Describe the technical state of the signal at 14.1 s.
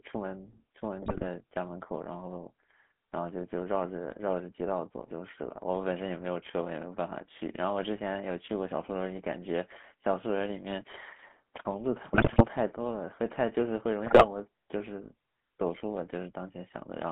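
At 14.1 s the signal is inside a burst of GSM bit errors running from 14.06 to 14.25 s. Corrupted bits are reaching the speech decoder here. Damaged filter, pitch and gain values warp the spectrum and throw the level around from frame to frame. The speech breaks up into squawks, pops and gargling for about 0.19 s. The error rate is about 4%.

Underneath this, the whole clip carries the GSM full-rate codec. Its rough texture fits a 13 kbps coder. The sound is confined to a telephone band of roughly 200 Hz to 3.5 kHz. The codec rebuilds speech from a vocal-tract model excited by regularly spaced pulses, keeping only a thinned excitation. That leaves a clearly audible buzzy, gravelly roughness at this moment too.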